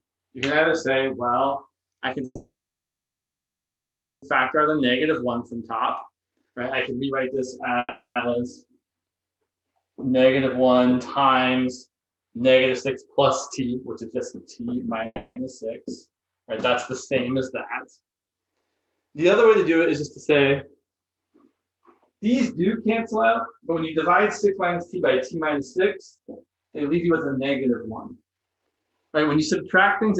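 At 2.25 s a call audio freeze begins and lasts until 4.24 s. The receiver runs out of audio, likely because packets were held up in transit, and stretches the last sound into a brief fading tail before about 1.76 s of silence. When the stream resumes, it picks up exactly where it stopped. Unlike a dropout, nothing is lost: the gap is inserted, and the stream falls about 2 s behind.

From 4.56 to 8.66 s a jitter buffer speed-up plays the audio at 115% of normal speed, trimming roughly 0.7 s in small pitch-period slices. The tempo is hurried, but the pitch does not rise, which is what separates it from a sped-up or resampled playback.

Inside that stretch, from 7.79 to 8.18 s, a second short freeze, likely from another packet stall, adds about 0.37 s, with a tail and about 0.13 s of silence.

A second speed-up, also at 115%, runs from 13.59 to 15.86 s and removes about 0.3 s. Within it, from 15.06 to 15.38 s, a third freeze, likely caused by delayed packets, inserts about 0.3 s, mostly tail with about 0.07 s of silence.

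From 23.15 to 30.18 s the strongest speed-up holds 123% for the rest of the clip, cutting about 1.5 s. The audio sounds clearly rushed while its pitch stays steady.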